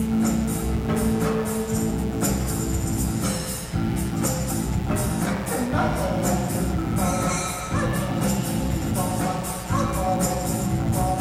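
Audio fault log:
throughout mains buzz: switching spikes twice per 60 Hz cycle spread harmonics into the kilohertz range, a raspy rather than smooth hum, roughly 15 dB below the sound.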